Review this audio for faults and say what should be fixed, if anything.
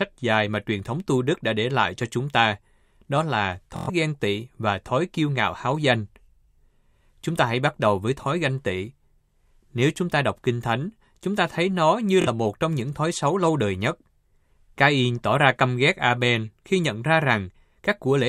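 Bluetooth stutter occurs twice in this speech, at 3.76 to 3.90 s (after "chúng ta đó là", before "ghen tị và thói") and 12.22 to 12.28 s (after "ta thấy nó như", before "một trong những thói"). About 116 ms and 46 ms of audio went missing, and the receiver filled each gap by re-playing a short slice, giving a brief buzzy stutter. Unlike a plain dropout, the gap is not silent, and the speech then resumes further on. Preventing it needs a stronger link or a deeper receive buffer.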